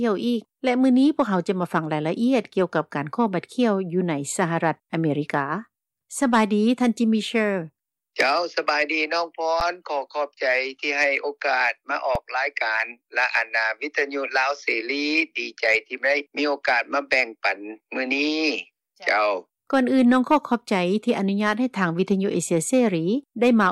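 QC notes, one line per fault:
9.60 s and 12.15 s, underrun with held sample: the output ran dry for 8.6 ms and then 2.7 ms (the second fits a 128-sample block). The waveform freezes at its last value, so the sound drops out without a click. Around 10 ms and 3 ms of live audio were skipped.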